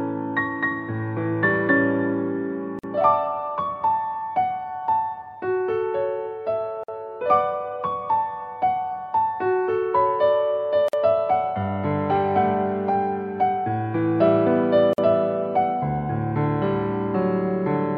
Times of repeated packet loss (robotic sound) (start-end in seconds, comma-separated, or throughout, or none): none